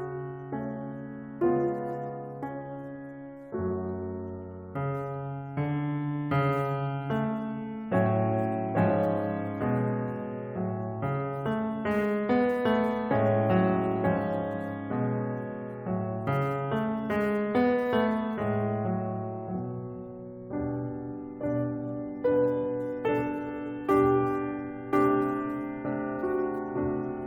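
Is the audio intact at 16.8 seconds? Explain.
No. Sample clock jitter runs through the whole music clip, including 16.8 s. The converter's clock wanders by roughly 7 microseconds, so samples land early or late, adding a rough hiss about 30 dB below the music. Unlike a steady noise floor, it swells on loud, bright passages and disappears in silence.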